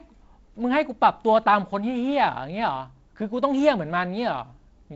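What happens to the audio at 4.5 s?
Nothing goes wrong at 4.5 s: the speech carries straight through that moment intact, with only the light, steady upper-band hiss of the G.722 wideband telephone coding at 48 kbit/s.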